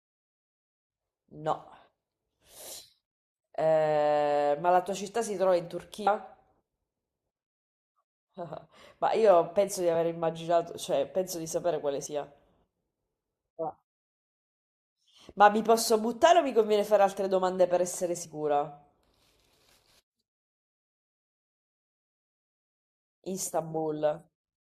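Compressed frames were skipped three times: the decoder never played a short run of 21.3 ms frames, so the speech lurches forward by roughly a tenth of a second at 6.06 s and by about 70 ms at 12.05 s and 18.24 s. Those gaps fit about four, three and three missing frames. At each join a sliver of speech is simply gone.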